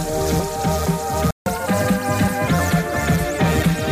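A playback stall occurs from 1.31 to 1.46 s. The sound cuts off mid-flow and the output is silent for about 152 ms before the audio resumes. The likely cause is that the player's buffer ran dry or its playback thread was briefly blocked, so no samples reached the output until it recovered. The gap is short but clearly audible as a hole in the sound.

Catch-up at higher speed follows immediately, from 1.46 to 2.48 s. To recover the time lost in the gap, the player resamples its backlog and runs it 1.15 times faster for about a second. Because resampling changes speed and pitch together, the sound is both hurried and raised by about two semitones, with a slightly chipmunk-like tint. At 2.48 s it returns to normal tempo and pitch, marking the end of the catch-up.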